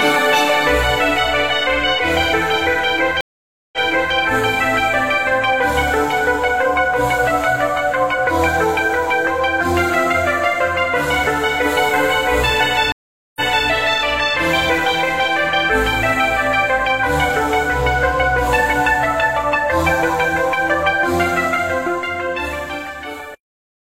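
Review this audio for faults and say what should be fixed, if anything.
There are two stream reconnects. At 3.21 s the audio drops out for about half a second (0.52 s), and by 4.14 s it's back but about 0.42 s earlier, so you hear a short stretch again. At 12.92 s it happens again: 0.44 s of silence, then playback resumes by 13.68 s about 0.33 s back. Each time the connection broke, the player reconnected and started a fresh decoder mid-stream, and the server replayed a burst it had already sent. To prevent it, buffer more on the client and resume by byte offset so repeated audio gets dropped instead of played twice.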